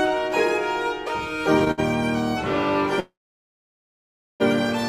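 From 1.59 to 1.80 s the sound catches and drags in four short hitches, the longest 64 ms, with about half that stretch being held-over sound. These repeated stalls (stutter) come from packets arriving late, so the jitter buffer kept running dry and the receiver extended the last sound each time. Nothing is lost.

At 3.00 s the sound halts, briefly trails on, then drops to silence for about 1.3 s before resuming at 4.42 s exactly where it stopped. This call audio freeze was likely caused by packets being held up in transit, emptying the jitter buffer and inserting a 1.4 s gap.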